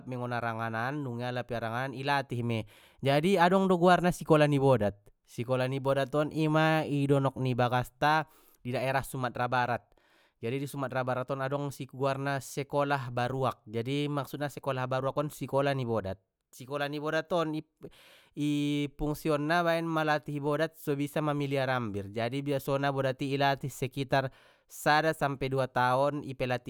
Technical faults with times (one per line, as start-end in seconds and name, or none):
none